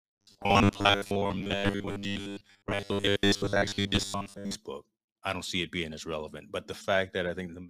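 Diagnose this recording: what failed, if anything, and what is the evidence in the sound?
Driver or buffer stage. Robotic sound from repeated short buffers, 0.01 to 4.55 s. Speech becomes a rigid 100 Hz buzz. Likely 10 ms chunks replayed, replacing most real audio.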